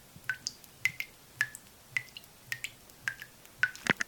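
Nothing in these few seconds of sound stands out as a technical fault; the audio simply runs its course without a hitch.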